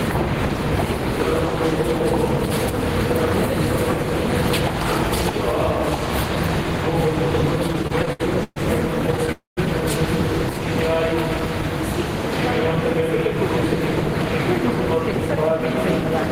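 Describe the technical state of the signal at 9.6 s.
At 9.6 s the sound has just resumed after a call audio freeze from 9.32 to 9.59 s. The last sound was stretched into a fading buzz or hiss, then went silent for 0.16 s. This likely comes from a jitter buffer running empty. Unlike a dropout, nothing is lost; the audio picks up where it stopped.

Gain pumping is also present here. The level dips and swells by around 5 dB with each loud sound, likely a fast limiter reining in gain that is set too high. It rises and falls with the loud moments, unlike a steady shift in level.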